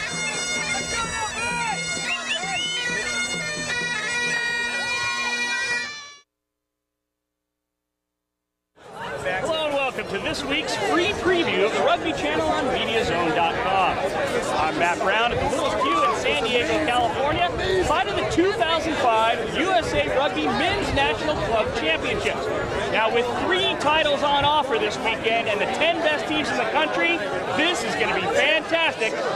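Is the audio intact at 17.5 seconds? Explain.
No. At 17.5 s the audio sits inside a run of periodic USB or driver dropouts lasting from 15.35 to 18.16 s. Something stalls the audio driver or bus every 0.064 s, and a tiny sliver of audio, on the order of a tenth of a millisecond, is skipped outright rather than filled with silence. The result is a steady ticking at roughly 16 per second, heard only while sound is present. That strict, even spacing separates it from scattered random clicks.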